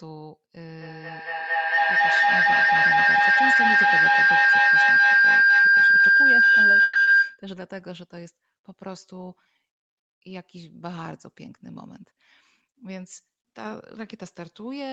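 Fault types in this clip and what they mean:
Feedback howl: From 0.81 to 7.5 s, a tone near 1.5 kHz swells to about 17 dB above the speech and pulses roughly every 200 ms. Two devices in one room are looping microphone to loudspeaker with gain on each pass, so the tone keeps building rather than dying away.
Call audio freeze: At 6.83 to 6.98 s, the sound stretches into a fading continuation of the last sound for 120 ms, then resumes exactly where it stopped with nothing lost. The likely cause is delayed packets emptying the jitter buffer, and the pause adds 120 ms of delay.
Short concealed packet loss: At 7.03 to 7.10 s, 40 ms of speech never arrived in time, so the receiver extended the preceding sound to cover the hole and crossfaded back. It is heard as a brief smear, and that stretch of speech is gone.
Jitter buffer speed-up: From 11.33 to 12.19 s, the speech runs at 106% speed with unchanged pitch, sounding slightly hurried. 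To cut excess buffered delay, the receiver removed about 70 ms in total as many short pitch-period slices.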